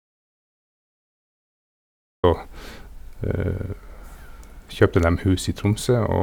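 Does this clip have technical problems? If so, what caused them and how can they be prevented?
Yes. An audio dropout to silence runs from the start until 2.24 s. The clip opens in silence with no room tone, then the speech begins mid-flow. The input was likely lost, by disconnection or muting, while silence kept recording. Secure connections and check input meters before recording.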